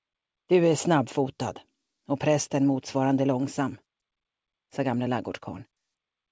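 No technical faults can be heard; the audio comes through a call connection whose wideband coding leaves nothing above 8 kHz, which fits G.722 at 64 kbps.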